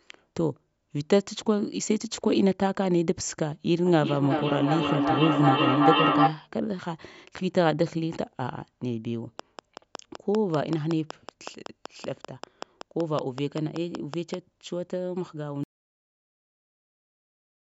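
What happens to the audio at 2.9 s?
Nothing goes wrong at 2.9 s: the speech runs on intact through that moment, carrying only the ordinary character of call microphone processing, with its lowest bass trimmed and nothing above 8 kHz.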